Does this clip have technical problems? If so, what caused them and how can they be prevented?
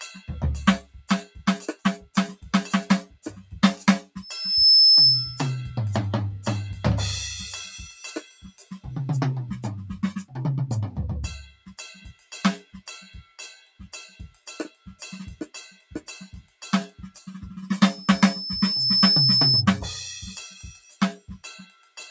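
Yes. Throughout the music the level pumps and breathes: attacks come through, but held notes and decaying tails sink by something like 10 dB. This is a noise suppressor applied to music. It was tuned for speech, so it treats sustained tones and reverb as background noise and keeps pulling them down. The top of the sound stops near 8 kHz, which is ordinary for call microphone processing. To prevent this, switch off noise suppression, or use a music mode, whenever music is sent over the call.

At eight points the suppressor bites much harder, and the music sinks or its decay is cut off. These are sounds cut by the noise suppressor: 0.82–1.41 s, 1.76–2.16 s, 3.07–3.52 s, 8.21–8.71 s, 11.47–15.03 s, 15.43–16.09 s, 16.42–17.27 s and 20.74–21.99 s. The deepest drops are about 14 to 17 dB. The longest stretch, 11.47–15.03 s, is dulled for about two seconds in total. The same fix applies: keep speech-oriented suppression out of the music path.

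From 4.21 to 5.51 s a piercing tone at 5.3 kHz swells up over roughly half a second. It ends up around 10 dB louder than the music. This is a loudspeaker feedback squeal. A microphone is picking up the speaker it feeds, and at 5.3 kHz the loop gain rises above one, so that frequency feeds on itself and keeps growing. To prevent it, use headphones or separate the microphone from the speaker, lower the monitor gain, or notch out the offending frequency.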